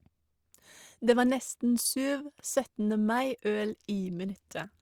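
No technical faults are audible.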